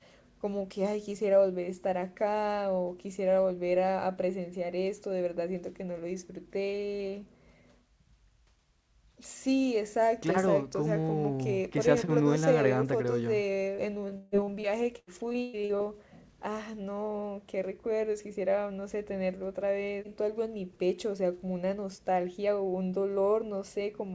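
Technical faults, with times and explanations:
13.76–15.81 s, repeated packet loss (robotic sound): the speech turns choppy, with pieces missing. Fourteen gaps hit this stretch, the longest about 145 ms. Each was patched by stretching the previous sound, so roughly a quarter of the span is synthetic fill.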